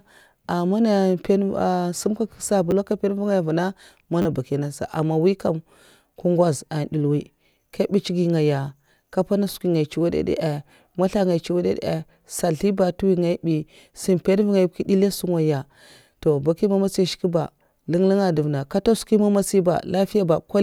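At 2.71 s, after "sum kye kak", a repeated buffer gives a brief click. New audio arrived late, so one short piece, which fits a 10 ms buffer, played twice. At 4.22 to 4.25 s, before "bakiya nasa ama mwi", it plays four times, a short buzz.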